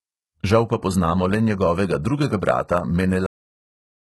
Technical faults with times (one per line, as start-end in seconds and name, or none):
0.00-4.11 HE-AAC compression
3.26-4.11 cut-off end